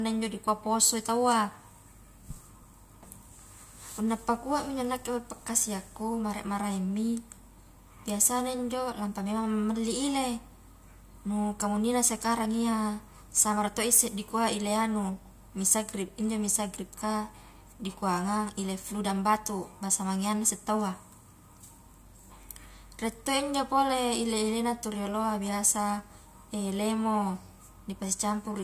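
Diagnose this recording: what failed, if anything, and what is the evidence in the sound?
Nothing failed; no audible fault at any stage.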